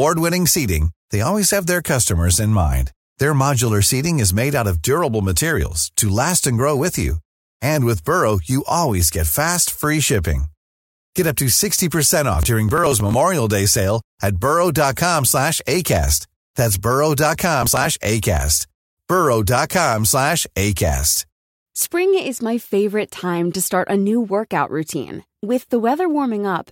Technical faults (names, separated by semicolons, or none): processor overload crackle